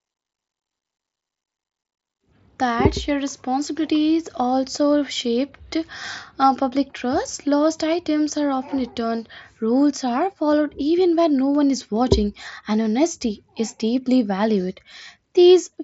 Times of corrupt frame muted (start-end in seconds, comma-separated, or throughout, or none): none